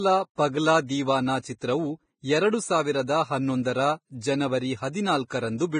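Speech, heavily damaged throughout by what is likely Vorbis compression at a low bitrate, around 22 kbps by the sound of it. Nothing survives above 9.7 kHz, and the treble below that cut-off has been quantised so coarsely that fine detail turns into hiss of similar energy, leaving sibilants grainy and onsets smeared. On a spectrogram the top edge is a flat ceiling at 9.7 kHz, with blotchy, noisy texture beneath it where clean harmonic and fricative detail should be.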